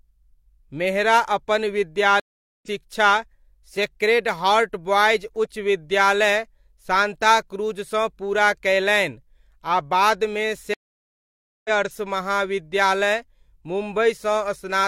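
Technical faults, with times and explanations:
2.20–2.68 s and 10.74–11.70 s, stream reconnect: After "मेहरा अपन" the speech stops for 432 ms, and at 10.74 s it stops again for 911 ms, while the player drops its connection and starts a fresh decoder. When the sound returns, it picks up further along, roughly a third of a second later the first time and around 0.7 s later the second, with a brief muted or faded onset. Unlike a plain dropout, the speech jumps ahead instead of continuing where it broke off.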